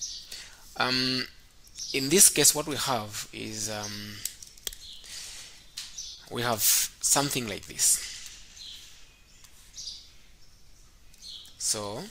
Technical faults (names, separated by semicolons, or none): short concealed packet loss